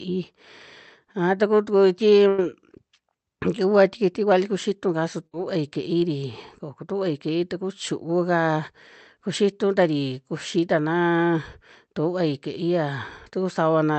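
At 2.28 s a burst of packet loss drops about 100 ms of speech. The receiver stretches the last sound across the gap, fading it out as a buzz or hiss. At 5.27 s, after "vali kuxitu kaa su", another burst removes about 60 ms the same way.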